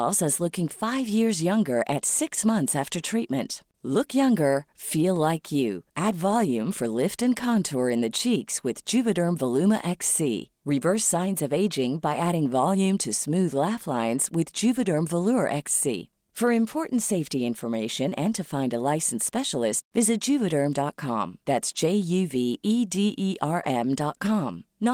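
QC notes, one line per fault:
No faults heard in this speech recording.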